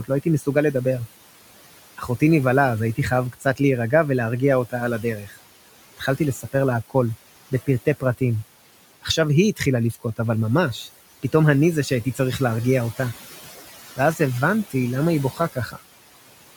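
Noise suppressor artifacts run through the whole of this speech recording. The suppressor pulls the room's steady background, itself sitting about 17 dB below the speech, down by about 17 dB wherever it judges the signal to be noise, so the floor sinks in the gaps and swells back under each phrase. Unlike a codec's steady swirl, this pumping follows the speech level frame by frame. Speech cut by the noise suppressor also occurs in five stretches: 0.04–0.75 s, 1.97–3.6 s, 4.66–10.19 s, 11.23–12.99 s and 13.96–15.79 s. Within them, soft consonants and quiet endings are turned down with the background, by about 12 to 16 dB and at worst about 17 dB, adding up to roughly a tenth to three quarters of a second per stretch. These parts sound swallowed rather than silent, which sets them apart from dropouts or hard gating, where the audio vanishes abruptly.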